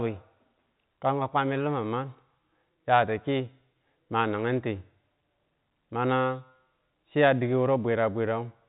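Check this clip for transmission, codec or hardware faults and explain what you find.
I find no transmission, codec or hardware faults in this clip.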